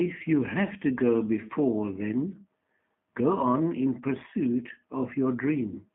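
From start to finish, the speech carries G.729 codec damage, and it is plainly audible. The sound is squeezed into a telephone band of about 150 Hz to 3.4 kHz. Nothing bright survives above that. Each short frame is rebuilt from a vocal tract filter, a pitch predictor and a few pulses. That coarse rebuilding makes the voice rough and slightly synthetic. The thin, buzzy texture fits a low rate near 8 kbit/s.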